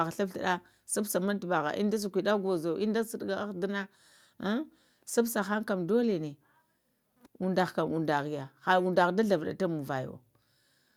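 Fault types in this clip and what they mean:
No technical faults heard.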